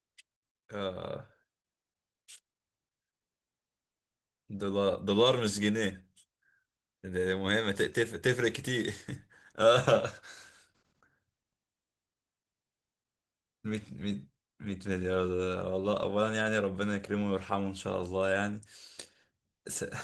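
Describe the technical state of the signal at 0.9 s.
At 0.9 s the signal is inside a sudden gain jump spanning 0.36 to 1.04 s. Level and background noise drop together by about 5 dB at once, with no fade. The abrupt step most likely comes from a gain setting applied without a ramp.

Opus voice compression is also audible here, as throughout the clip. The speech sounds muffled and slightly hoarse and robotic, with coarse excitation. This fits hybrid coding at around 16 kbps, with SILK below 8 kHz, a thin CELT layer above it, and 20 ms framing.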